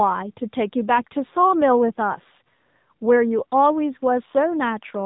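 From start to finish, the speech has passed through the AMR narrowband mobile codec, which rebuilds each 20 ms frame from a simple vocal-tract model excited by a few pulses. With narrowband sampling, nothing above 4 kHz survives, so the speech sounds boxed in and muffled. The codec damage is plainly audible as a buzzy, synthetic edge on the speech, which fits a low AMR-NB mode of about 7.4 kbps.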